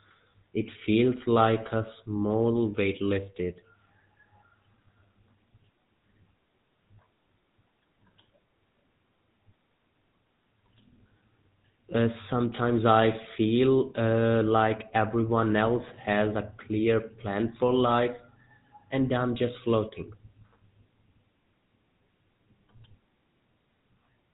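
From start to finish the speech went through the GSM full-rate codec, likely at 13 kbps, leaving a buzzy, gravelly roughness and nothing above 4 kHz.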